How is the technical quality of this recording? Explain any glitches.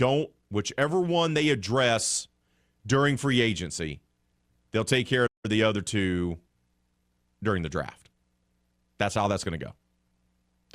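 The speech has one glitch. A playback stall from 5.26 to 5.45 s, after "they'll take care", likely came from the player running short of data, silencing the sound for about 0.17 s before "the other two".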